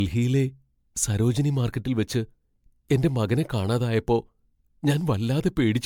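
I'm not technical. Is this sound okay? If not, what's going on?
No. The speech sounds swirly, hollow and smeared from start to finish, with soft, blurred onsets, likely generation loss from being re-saved as MP3 around seven times.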